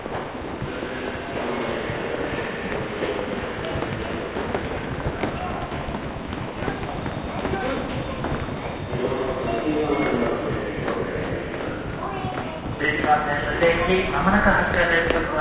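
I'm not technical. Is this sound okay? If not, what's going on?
Yes, nothing about this sound stood out as a problem when I listened to it.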